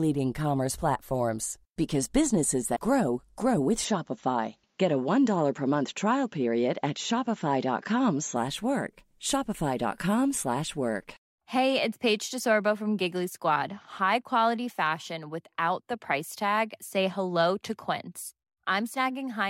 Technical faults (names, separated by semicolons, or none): damaged data in a compressed stream; input switched to a poorer device